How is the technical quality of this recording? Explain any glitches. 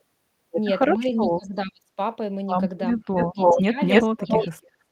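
The recording is degraded by two recurring call-processing faults through most of the speech.

Speech suppressed in double talk at 0.96–1.98, 2.94–3.04, 3.3–3.78 and 4.03–4.53 s: the voice drops by up to about 30 dB (about 10 dB in the short second dip), likely because an echo canceller turned down both its own talker and the loudspeaker echo during overlapping talk. A waveform shows the envelope collapsing, and a spectrogram shows energy fading out.

Echo leak at 2.96–3.62, 3.88–4.45 and 4.62–4.71 s: a copy of the voice arrives 280 ms late, likely from loudspeaker pickup the canceller missed. It is about 5 dB louder than the speech in the first two spans and about 35 dB quieter in the last. A spectrogram shows the same patterns repeated, shifted later in time.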